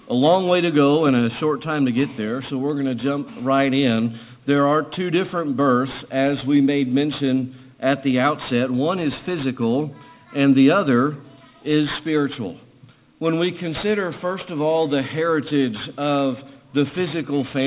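Aliasing runs through the whole clip. The rate was cut without a filter first, which fits a drop to 8 kHz. Content above 4 kHz folds back down to wrong pitches. Bright sounds turn gritty and metallic, with the folded energy roughly 20 dB below the signal.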